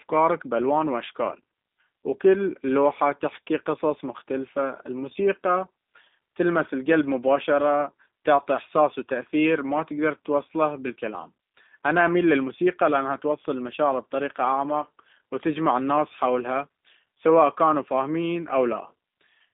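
Speech runs through G.729 codec coding from start to finish. The voice is rebuilt from a vocal-tract filter, pitch predictor and sparse pulses, giving a plainly audible rough, synthetic edge, consistent with an 8 kbit/s G.729A stream. The line band spans roughly 200 Hz to 3.7 kHz. On a spectrogram, energy stops at a hard ceiling near 3.8 kHz with blank space above, and a thin floor below 200 Hz.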